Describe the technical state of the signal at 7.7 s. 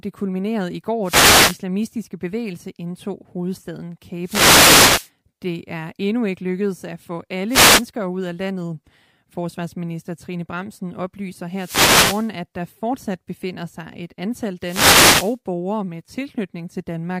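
At 7.7 s the signal is in the middle of a wireless microphone noise hit, lasting from 7.48 to 7.85 s, between "ikke lykkedes at få" and "ud af landet". The radio link from the FM microphone fades as reflected paths cancel, so receiver noise rises over the speech and is heard as a brief swish of static. On a spectrogram it shows as a broadband smear of noise; on the waveform, a raised, hissy floor.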